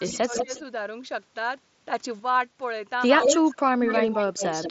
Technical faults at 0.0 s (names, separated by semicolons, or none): speech suppressed in double talk; echo leak